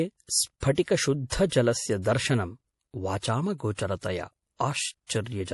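Throughout, the speech sounds watery and swirly with nothing above 11.5 kHz, likely MP3 compression starved of bits, fitting a bitrate around 48 kbps.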